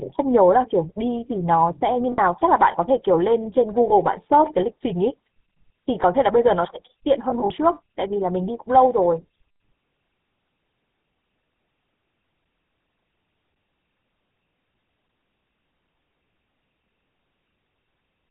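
Speech passed through the GSM full-rate codec, whose coarse, sparsely sampled pulse excitation and 4 kHz ceiling fit a 13 kbps full-rate link. The result is a plainly audible buzzy, gravelly roughness with no top end. Lost GSM frames were concealed by repeating the last good frame, leaving a brief rough, metallic ring at 2.12–2.19 s (about three frames), at 3.88–3.93 s (one frame), and in short scattered gaps over 7.3–7.51 s, the longest around 40 ms.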